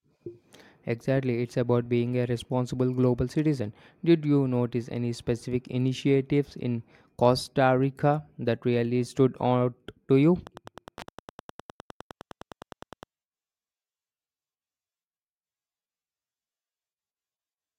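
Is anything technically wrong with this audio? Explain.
Yes. From 10.39 s to 13.07 s, just after "stood out to you", there is Wi-Fi interference. A nearby Wi-Fi radio's beacon bursts, repeating every 102.4 ms, are rectified by the audio circuit and come through as steady ticking close to ten per second, well below the speech. The slow, even tick rate distinguishes it from mobile-phone GSM buzz, whose pulses repeat far faster and fuse into a continuous raspy tone.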